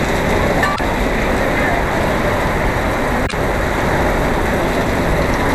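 A short glitch cuts through the audio from 0.72 to 0.80 s, and a second one follows from 3.25 to 3.34 s, each lasting roughly 80 ms. Both are damaged data in a compressed stream: a stretch of the encoded bytes was corrupted, so the decoder misread those frames, lost its lock on the frame structure and emitted garbled output until it found the next valid frame header and resynchronised.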